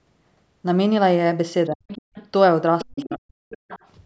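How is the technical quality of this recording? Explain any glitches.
The call audio has two kinds of trouble, both typical of the echo control in a call chain. The band stops at about 8 kHz, as expected for call microphone processing.

Speech suppressed in double talk: at 1.72 to 1.84 s and again from 2.84 to 3.39 s, the talker's speech drops sharply, by around 40 dB at its deepest, nearly vanishing. The likely cause is an echo canceller that, with both sides talking at once, turned everything down.

Other side's voice leaking through: at 1.88 to 2.28 s, 2.79 to 3.16 s and 3.5 to 3.88 s, a second, fainter voice is audible, roughly 10 to 20 dB below the speech. It is likely loudspeaker playback that the echo canceller did not fully remove from the microphone.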